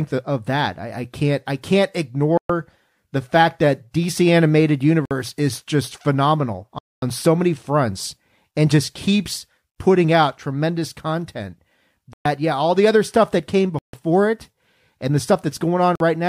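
The speech drops to silence six times, at 2.37, 5.05, 6.79, 12.13, 13.79 and 15.95 s, for 48 to 237 ms, then resumes. This pattern is likely a Bluetooth stall, where the receiver's buffer ran dry.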